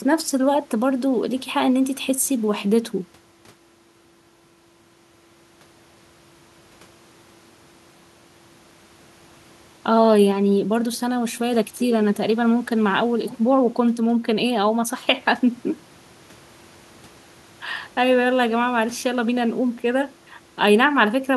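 Nothing in this speech recording points to a technical fault; the signal stays intact and continuous throughout, with no audible disruption in the audio chain.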